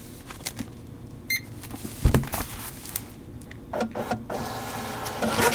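Nothing technical goes wrong anywhere in these everyday sounds, so there's no fault to point to at any moment.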